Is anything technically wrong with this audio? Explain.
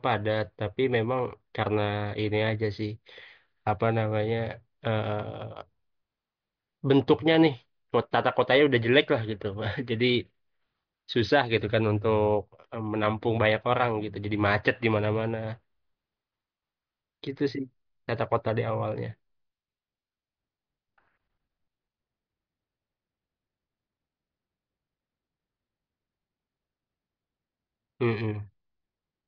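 No, nothing technically wrong can be heard in this speech recording. No fault turns up at any point in the audio.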